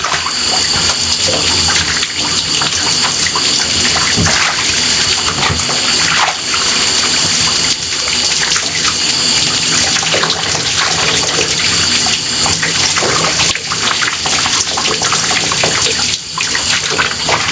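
A recording of everyday sounds with gain pumping all the way through: the gain swings by around 10 dB under each loud sound, leaving everything squashed. That's likely the input gain set far too high and a fast limiter clamping down on every peak. The call processing band-limits things, with nothing above 8 kHz.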